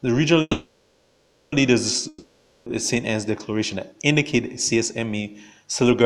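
A call audio freeze, most likely packets held up in transit until the jitter buffer ran dry, stalls the audio from 0.41 to 1.54 s. The last sound is stretched into a fading buzz for about 1.1 s, then playback resumes where it stopped, with nothing lost but everything after arriving 1.1 s later. A long network dropout follows from 2.08 to 2.71 s, likely a spell when no packets arrived at all. About 0.58 s is filled with a decaying hiss, and when the audio returns that stretch is gone for good.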